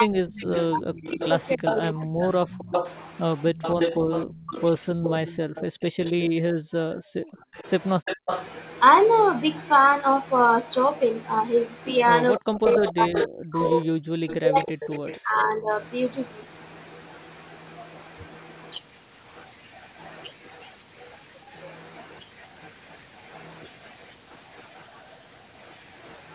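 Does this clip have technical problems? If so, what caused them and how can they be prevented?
Yes. Speech suppressed in double talk occurs from 0.0 to 2.05 s, 4.41 to 4.56 s, 7.3 to 8.29 s and 12.38 to 15.69 s. The voice dips by some 30 to 40 dB or breaks up while the far side is also talking, likely because the echo canceller could not tell the local talker from loudspeaker echo and attenuated both. Tuning the canceller for better double-talk detection, or using a headset, prevents this.

Echo leak runs from 0.38 to 8.44 s and again from 12.37 to 15.79 s. A copy of the voice trails it by 280 ms at about 10 dB below the speech, likely loudspeaker sound the remote canceller failed to subtract. Lowering speaker volume or using headphones on the far end prevents it.

Background gated by the echo canceller appears between 3.99 and 7.02 s. The room sound drops by about 40 dB for roughly a second in total and returns when the canceller releases, because the microphone was clamped while the loudspeaker played. 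Gentler suppression or comfort-noise fill prevents the audible holes.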